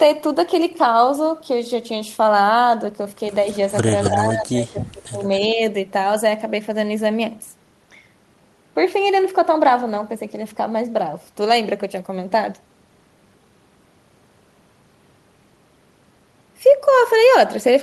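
An echo canceller at a loudspeaker end of the call has likely let part of its microphone pickup through, producing echo leak: a copy of the speech returns about 264 ms late. At 3.54 to 3.58 s it is a faint scrap, far below the speech. At 4.02 to 4.14 s it rises to nearly the level of the speech itself. Quieter, low-level fragments follow at 4.81 to 4.86 s and 5.31 to 5.40 s, each short.

Overlapping this, the same canceller faces both sides talking at once. It likely cannot tell the local talker from the returning echo, and it turns both down, which is speech suppressed in double talk. From 4.08 to 5.28 s the speech dips unevenly, by up to something like 15 dB, for about a second in all. A shorter, shallower dip of around 10 dB follows at 5.46 to 5.61 s.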